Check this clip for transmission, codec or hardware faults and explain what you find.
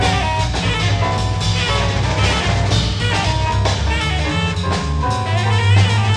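Nothing here sounds like a transmission, codec or hardware problem; the audio comes across steady and intact all the way through.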